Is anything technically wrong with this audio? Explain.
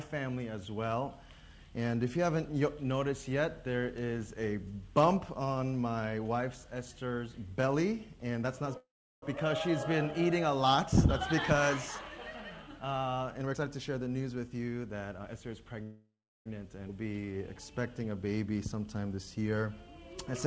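Yes, there are several network-style glitches, all heard through a call path with nothing above 8 kHz, which fits a wideband codec like G.722.

From 8.77 to 9.24 s there's a call audio freeze. The last sound carries on as a fading buzz, then about 0.37 s of silence, before the audio resumes right where it stopped. This was likely late packets draining the jitter buffer.

From 13.40 to 15.76 s a jitter buffer speed-up kicks in. The receiver trims tiny pitch-period slices over and over, losing roughly 0.4 s. Playback runs about 116% speed at the same pitch and sounds rushed.

A second call audio freeze hits from 15.83 to 16.48 s. It has the same fading fill, then about 0.35 s of silence, and adds about 0.63 s of delay with nothing lost.

From 16.88 to 16.91 s there's a skip ahead. Roughly 0.3 s of audio is dropped and the two sides are butted almost directly together, so playback jumps forward abruptly.

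From 17.03 to 17.38 s comes a jitter buffer slow-down. Repeated pitch periods add 69 ms to rebuild the reserve, so the audio drags at about 83% speed, same pitch, slightly stretched.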